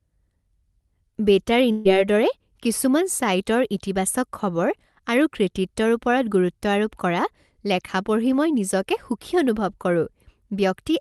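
At 1.71 s a burst of packet loss drops about 140 ms of speech; concealment holds the last sound for roughly 134 ms, fading, before playback resumes further on.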